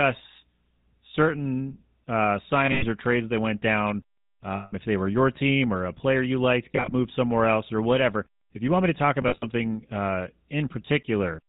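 From start to finish the speech carries the GSM full-rate codec's damage plainly: a buzzy, gravelly roughness from the pulse-driven excitation, with nothing above 4 kHz. The low rate, 13 kbps, fits the first GSM codec. Unlike a simple low-pass or narrowband filter, which only dulls the sound, this codec roughens the voice's texture itself.

Lost GSM frames break in four times, each heard as a held, metallic ringing rather than a clean gap or click. Between "certain uh" and "or trades that went" at 2.66 to 2.85 s, about 120 ms goes missing in scattered pieces, the longest close to 100 ms. After "trades that went down", at 4.56 to 4.73 s, a solid 160 ms is lost before "if they were your". At 6.72 to 6.93 s, 100 ms is lost in short bits of about 20 ms. After "want me to talk", at 9.22 to 9.46 s, 120 ms is lost, the longest run around 70 ms. The repeated last frame at falling level is what separates this from dropouts that simply go silent.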